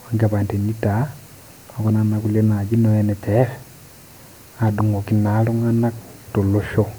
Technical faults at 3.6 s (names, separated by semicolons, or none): none